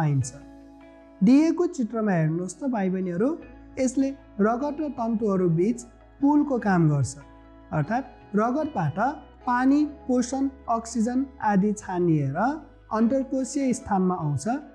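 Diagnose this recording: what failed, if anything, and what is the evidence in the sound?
Nothing stood out on listening that would point to a failure at any stage of the chain.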